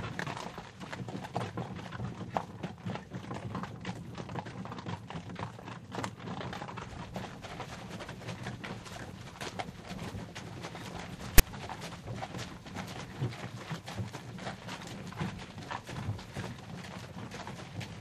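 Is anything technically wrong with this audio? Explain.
Yes. At 11.38 s, file tags are played as audio: a block of text tag bytes is decoded as samples, producing a brief, hard-edged, loud rasp offset to one side.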